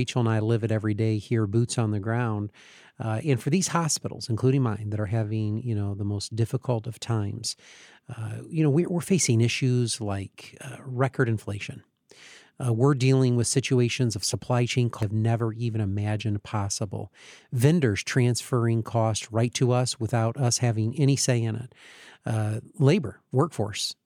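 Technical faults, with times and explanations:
15.03 s, damaged data in the compressed stream: a brief glitch where corrupted bytes threw the decoder off sync until it locked onto the next frame header.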